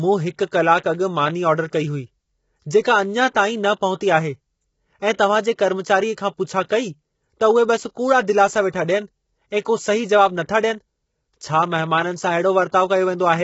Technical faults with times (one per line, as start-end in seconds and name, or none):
0.00-13.43 low-delay AAC compression
5.13-5.19 pre-echo
12.68-12.73 pre-echo